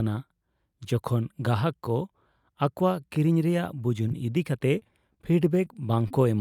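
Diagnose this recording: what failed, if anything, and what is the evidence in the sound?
Network packet loss caused scattered short gaps in this speech between 4.08 and 6.12 s: roughly seven lost or late packets, the longest near 30 ms. The receiver concealed each hole by extending the preceding sound, leaving brief ticks and smeared hiccups in otherwise clear speech.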